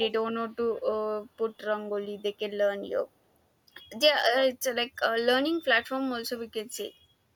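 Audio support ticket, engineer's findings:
Echo leak, 0.73–0.82 s: faint delayed copy of the speech, 339 ms behind, very low level. Likely far-end echo canceller letting residual loudspeaker pickup through.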